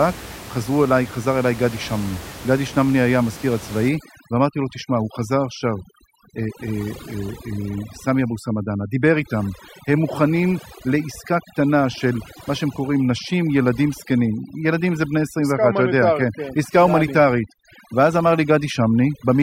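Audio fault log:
3.89 to 19.42 s, overdone noise removal: from here on the noise reducer is clamping hard, knocking bands near its noise estimate right down, so the room noise about 18 dB under the speech collapses into twinkly specks and the voice's quieter detail goes too.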